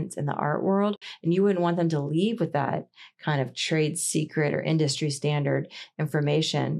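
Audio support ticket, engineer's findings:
Soft-edged dropout in the speech, 0.96 to 1.02 s, just after "in the art": sound fades out, gap of about 60 ms, fades back in. AAC frame loss with muting. The decoder zeroed the missing frames' spectrum, and the overlapping windows tapered the edges. The gap length fits several short frames lost in a row, as in a likely low-delay AAC stream.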